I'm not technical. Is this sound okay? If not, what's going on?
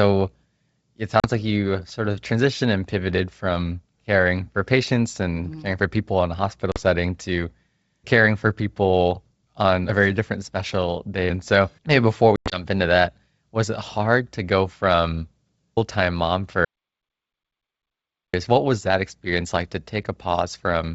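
No, not quite. Around 1.20 s, 6.72 s and again from 12.36 to 12.65 s there's packet loss on an ADPCM call: small bits of the call vanish as hard-edged gaps, and because the decoder loses track of the sound's level, the speech comes back with a click or slightly off before settling.

From 16.65 to 18.34 s there's an audio dropout to silence: the sound cuts out completely for nearly two seconds, with no background hiss at all, most likely because the input briefly disconnected or got muted, and whatever was said then is gone.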